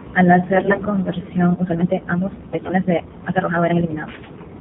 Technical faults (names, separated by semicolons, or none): AMR narrowband mobile codec; AMR bit errors; time-stretched section